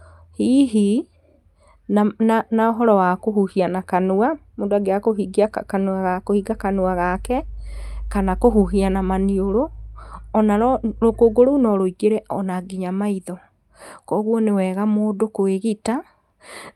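A recording of speech, with nothing technically wrong to point to anywhere along the way.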